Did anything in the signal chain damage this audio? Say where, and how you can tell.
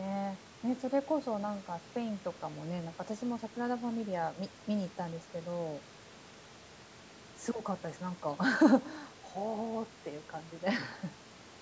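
No, the speech carries the expected signature of a call's microphone processing, with the lowest bass rolled off and nothing above 8 kHz, and no stage in the chain has left damage that can be heard.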